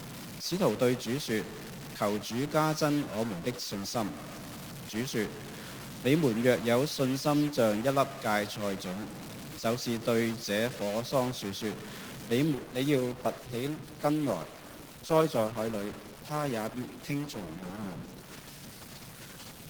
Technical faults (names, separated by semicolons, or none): stuck bit; adaptive stream at a lower bitrate